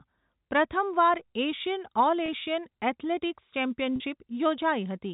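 At 2.26 to 2.28 s and again at 3.96 to 4.00 s the speech shows packet loss with pitch repetition. Gaps of 20 ms and 40 ms, consistent with one and then two lost 20 ms packets, are filled by repeating the last pitch period, heard as a brief buzzy hold rather than a silent dropout, under the 4 kHz-limited G.711 telephone band.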